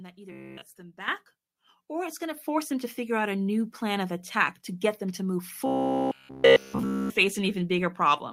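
At 1.08 s the microphone volume steps up by about 9 dB, and again at 2.37 s, between "or it's going to" and "force them to figure", by about 5 dB. Each time the call software has judged the input too quiet and raised the device's input level in a single jump, so the speech and the room noise behind it get louder together and stay there. That lasting, instant step is what sets it apart from a compressor or gain control, which rides the level with gradual swells.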